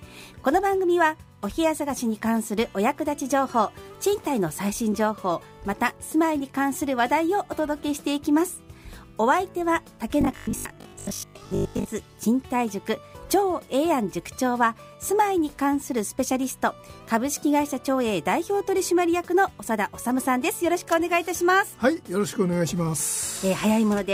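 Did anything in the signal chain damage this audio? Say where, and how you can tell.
Yes. From 10.21 to 11.93 s the sound becomes robotic, from repeated short buffers: a rigid, metallic buzz fixed at 50 Hz that still roughly follows the shape of the sound. This likely comes from the driver or buffer stage. Audio arrived too slowly, so the last 20 ms block was replayed to fill the gaps, about half the time, while fresh material was skipped. Mains hum at 50 Hz would persist under everything, but this buzz exists only inside that window and tracks the sound's envelope.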